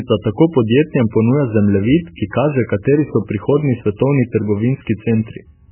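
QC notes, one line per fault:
Throughout, MP3 compression: the speech has nothing above 3 kHz and a watery, swirling texture with smeared consonant onsets. The heavy damage points to a very low bitrate, on the order of 8 kbps, likely from an MP3 encoder starved of bits that drops the treble and switches weak frequency lines on and off between frames. On a spectrogram, a hard flat ceiling at 3 kHz with patchy, flickering blocks below; the waveform shows softened transients.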